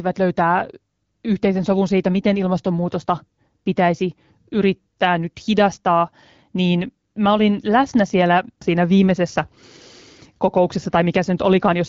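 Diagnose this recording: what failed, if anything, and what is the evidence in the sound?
Nothing stood out on listening to this speech recording, and no stage of the chain gives audible cause for a diagnosis.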